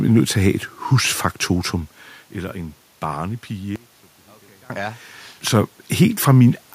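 An audio dropout to a faint residue runs from 3.76 s to 4.70 s, cutting out about 0.94 s of the speech. The signal vanishes abruptly mid-flow rather than fading, and the gap is not silent: a faint leak of the sound remains, roughly 25 dB below its normal level. The likely cause is a momentary loss of the wanted feed while the path after the break stayed live.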